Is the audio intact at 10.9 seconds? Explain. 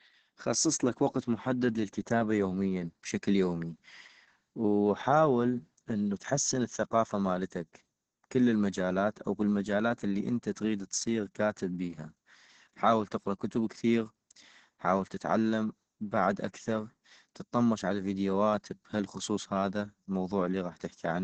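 No. Opus voice compression runs throughout, including 10.9 s: low-rate SILK coding, likely near 10 kbps, cuts everything above 9.1 kHz and coarsens the speech, leaving it muffled, hoarse and slightly robotic.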